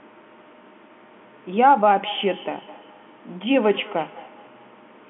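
Speech heard through a narrow telephone-band line, with a feedback echo between two devices from 1.87 s to the end: each sound returns roughly every fifth of a second, peaking about 20 dB below the speech, because a second device replays the call into a microphone whose echo canceller ignores it. This shows as faint, evenly spaced copies trailing each syllable on a spectrogram.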